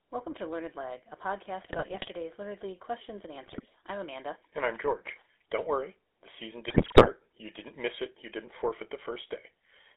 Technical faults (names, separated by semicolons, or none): GSM full-rate codec; GSM bit errors